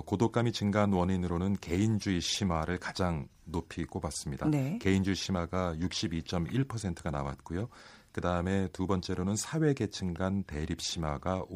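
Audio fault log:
Nothing to log here: the speech runs along without a single technical fault turning up anywhere in it.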